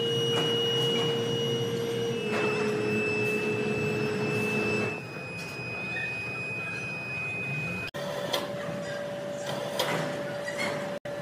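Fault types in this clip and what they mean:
Damaged data in a compressed stream: corrupted bytes make the decoder lose frame sync and hunt for the next header, producing brief glitches at 1.77, 7.85 and 10.97 s.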